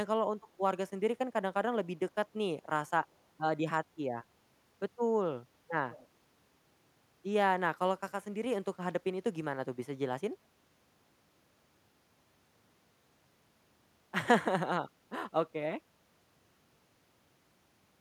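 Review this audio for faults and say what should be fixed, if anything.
An echo leak at 5.90–6.07 s gives a faint, discrete copy of the speech 151 ms late, unlike reverb's smooth tail. It likely comes from incomplete echo cancellation at a loudspeaker end. A headset or a better-tuned echo canceller on that side would prevent it.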